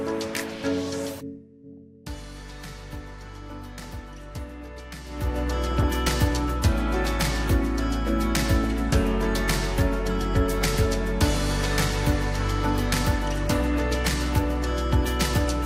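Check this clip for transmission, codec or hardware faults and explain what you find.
DAB burbling is present at 1.77 s, 3.79 to 3.94 s and 5.66 to 5.88 s. Under poor reception, bit errors slip past the error correction into the MP2 audio. Corrupted samples add short noise blips in individual sub-bands, and corrupted scale factors can make a sub-band jump in level for up to a frame. Here each event spans 8 to 11 frames, with error rates on the order of a few tenths of a percent. The gradual fader-like level changes are not a fault.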